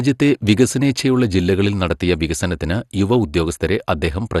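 Speech with MP2 compression audible throughout: nothing above about 12.2 kHz, and a dull, gurgling, granular texture from coarsely quantised sub-bands, likely a low-rate encode consistent with roughly 64 kbps.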